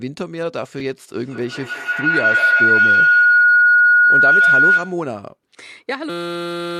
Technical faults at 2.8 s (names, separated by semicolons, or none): feedback howl